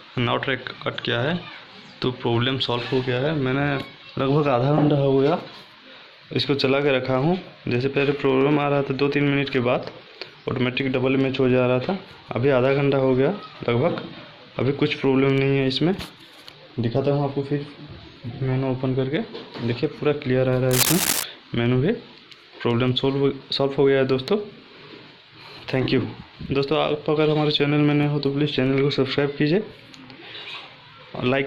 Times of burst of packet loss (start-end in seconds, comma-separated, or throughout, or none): none